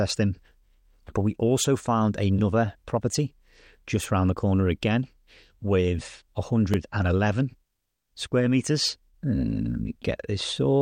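Speech clip with one repeated buffer fault at 6.74 s, right after "the corner again with". New audio did not reach the output in time, so the last block was played a second time. That block is about 1.33 ms long, which fits a 64-sample buffer. Because the block is so short, the doubled piece and the hard joins on either side come across as a click or brief buzz rather than an audible stutter. Essentially no audio is lost.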